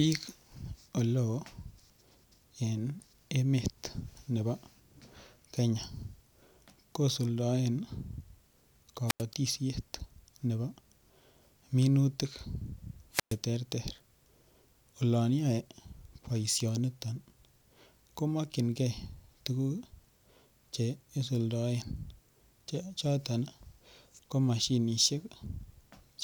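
At 9.07 s and again at 13.12 s the speech drops out in a wireless microphone squelch dropout: the FM link fades, hiss swells, and the receiver's squelch mutes for about 91 ms, then about 118 ms, before the voice returns.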